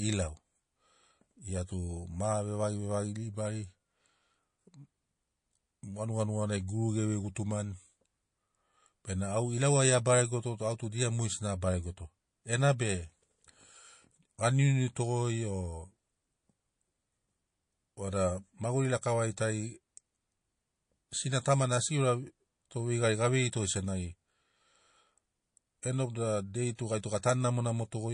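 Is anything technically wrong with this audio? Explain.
Yes. Throughout the speech, the sound is watery and swirly with chirpy sibilants and dulled treble, likely MP3 compression at a bitrate near 40 kbps, dropping weak frequency lines frame to frame.

Pre-echo occurs at 21.10–21.12 s and 26.76–26.79 s, with brief hiss rising about 11 dB and 23 dB before the attacks, as codec noise from long blocks spreads ahead of each onset.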